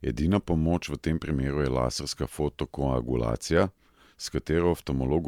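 From start to finish the speech has a swirly, hollow smear and softened attacks, classic generation loss, likely from MP3 at around 128 kbit/s being re-encoded about four times.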